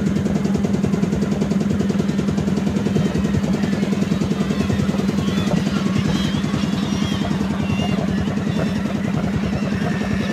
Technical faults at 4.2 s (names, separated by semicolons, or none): none